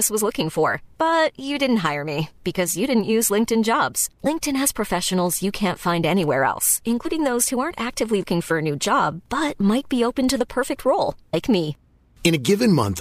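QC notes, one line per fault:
4.25 s, 7.04 s, 8.22 s and 11.33 s, compressed frames skipped: the speech jumps forward at each point, by about 50 ms at the first two, about 100 ms at 8.22 s and about 200 ms at 11.33 s. The jumps work out to roughly two, two, four and seven whole frames of about 26.1 ms each, so complete frames are missing or were rejected by the decoder.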